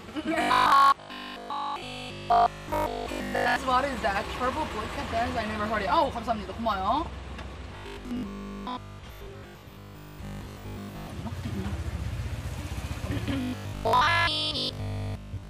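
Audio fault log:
0.42–3.56 s, 7.77–11.07 s and 13.41–15.49 s, robotic sound from repeated short buffers: audio likely arrived too seldom, so playback looped the last 20 ms, nearly throughout the first span and for most of the later two. The loop imposes a rigid, metallic 50 Hz buzz on the sound.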